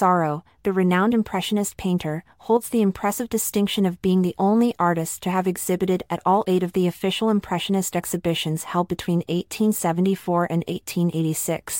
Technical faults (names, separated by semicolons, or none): one channel drops out